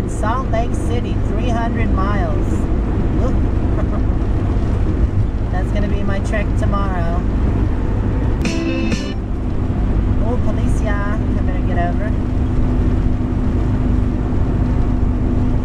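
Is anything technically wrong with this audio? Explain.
No, nothing technically wrong can be heard in this audio. There are no faults to explain at any point in the clip.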